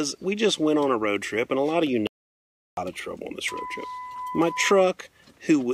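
From 2.07 to 2.77 s the sound cuts to total silence for about 0.7 s, an audio dropout to silence, likely from the input being lost while zeros were written.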